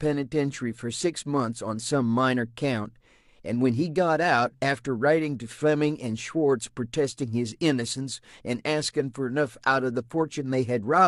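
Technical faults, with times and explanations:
No technical faults occur, so there are no times or explanations to give.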